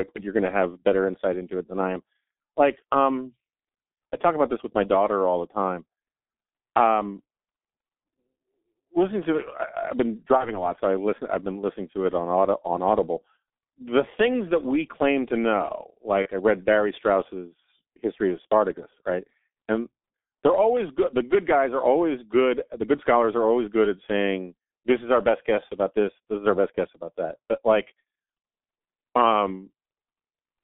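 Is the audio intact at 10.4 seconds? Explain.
No. At 10.37 s, after "I have been", there is VoIP packet loss concealed by the speech codec, lasting until about 10.62 s, where "lot so I listen" resumes. The gap is brief and fits a single lost 30 ms frame. The decoder fills it by repeating its last pitch and filter at a falling gain, so the sound turns into a short buzzy tone or coloured noise that fades. Because each frame builds on the one before, the damage outlasts the loss by roughly 200 ms. On a waveform this shows as a smooth, shrinking stretch. A spectrogram shows a frozen stretch that dims instead of changing.

Under this, the whole clip carries the G.723.1 codec, heavily damaged. Its sound points to a rate of about 6.3 kbit/s. It works in 30 ms frames and updates its voice model slowly, so the audio is muffled and hoarse, with smeared consonants. The line band runs from 250 Hz to 3.7 kHz, so a spectrogram shows an empty floor below 250 Hz and nothing above 3.7 kHz, with blocky energy changing at frame steps.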